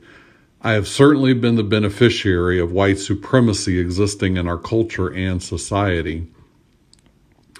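No audible technical faults anywhere in the speech recording.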